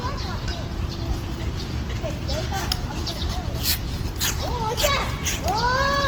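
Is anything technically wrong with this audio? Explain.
Yes. Throughout, the sound is grainy and rough, with tones turned noisy, likely from Opus compression in music mode at a rate around 16 kbps, where bands get filled with noise. A spectrogram shows smeared, speckled bands reaching about 20.2 kHz, without clean holes.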